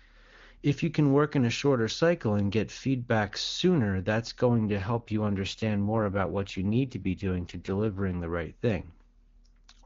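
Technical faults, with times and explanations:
4.5–8.22 s, AMR rate drop: the speech turns rougher, buzzier and more synthetic with no gap and no loss of bandwidth, then clears again. The roughness fits the AMR-WB codec dropping from its top 23.85 kbit/s mode to a mode near 8.85 kbit/s, with fewer bits left to model the vocal tract and its pulse excitation. On a spectrogram the 7 kHz upper edge stays put, but harmonics smear and fine detail coarsens. The waveform envelope shows no dropout.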